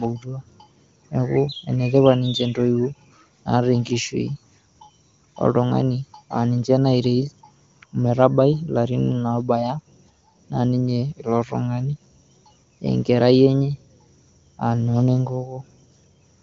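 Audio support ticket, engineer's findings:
No faults found; nothing to action on this clip.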